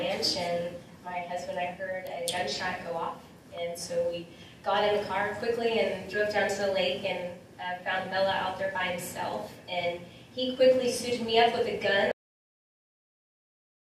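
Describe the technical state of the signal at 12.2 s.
Cut-off end from 12.12 s onward: the final buffers were never written, so the sound stops abruptly mid-event and drops straight to silence, with no natural decay.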